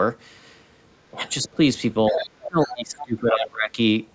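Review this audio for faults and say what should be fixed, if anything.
Speech suppressed in double talk appears at 1.11 to 1.2 s, 1.43 to 1.59 s, 2.1 to 2.25 s and 2.47 to 3.78 s. The speech dips by roughly 10 to 15 dB and by about 25 dB in the long final stretch. On a waveform the envelope sags, and a spectrogram shows the energy fading. The likely cause is an echo canceller turning everything down while both sides talked. A double-talk detector that holds the near talker's gain would prevent this.

The other side's voice is leaking through at 2.09 to 2.26 s, 2.43 to 2.75 s and 2.98 to 3.06 s. At first it is only about 5 dB below the speech, and later it is about 15 dB down. On a spectrogram it shows as broken harmonic traces overlaid on the main speech. It likely comes from loudspeaker playback that the echo canceller did not fully remove. Better acoustic isolation or a stronger residual-echo suppressor would prevent it.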